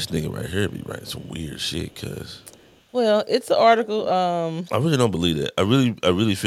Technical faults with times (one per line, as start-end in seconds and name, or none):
0.70-1.29 echo leak
1.87-2.01 echo leak
2.26-2.83 echo leak
3.84-3.88 echo leak